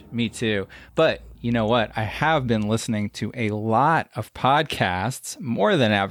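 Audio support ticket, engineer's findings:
Nothing stood out on listening to the speech; no faults found to log.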